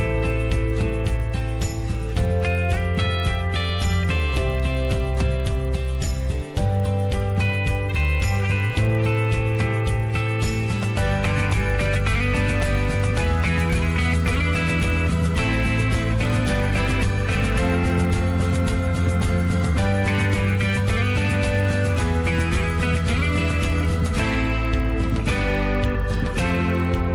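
A steady 20 Hz ticking rides on the sound throughout: the resampler was restarted on every 50 ms block, leaving an error at each edge of the 24 kHz to 48 kHz conversion.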